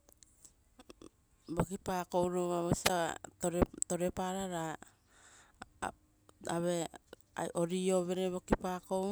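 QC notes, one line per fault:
2.84–2.90 s, wireless microphone squelch dropout: a brief burst of hiss, then a near-silent gap of about 9.5 ms before the speech returns. The analogue FM radio link faded, so the receiver's squelch muted its output until the signal recovered.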